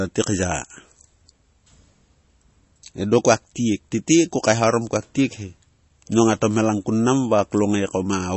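Speech with MP3 compression throughout. Nothing sounds above 8 kHz, and the watery, swirling damage plainly suggests likely low-bitrate encoding, around 32 kbps.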